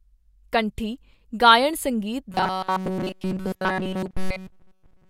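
Audio likely arrives too seldom from 2.31 s onward, so short 5 ms buffers repeat: robotic sound from repeated short buffers, a rigid metallic 188 Hz buzz.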